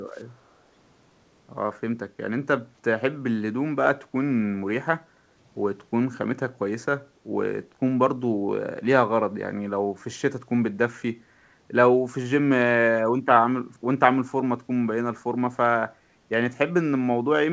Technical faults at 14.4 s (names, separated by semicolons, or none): speech suppressed in double talk